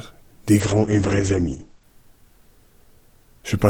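There's a call bitrate drop from 0.6 to 1.91 s: the top end cuts off around 8 kHz and the sound turns rough and watery, which fits the encoder falling to roughly 9 kbps.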